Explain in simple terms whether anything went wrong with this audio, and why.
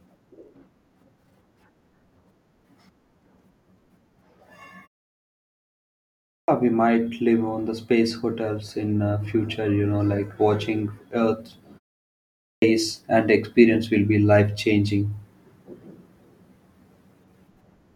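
Twice in this speech, the start of a phrase gets chopped off: a clipped start after a pause. After about 1.3 s of quiet, the audio at 6.06 s loses roughly 0.42 s before "we might live on", and at 12.22 s, after half a second of quiet, about 0.4 s disappears before "and experience will be". The playback device nods off during silence and takes a moment to wake up, so those opening sounds never make it out.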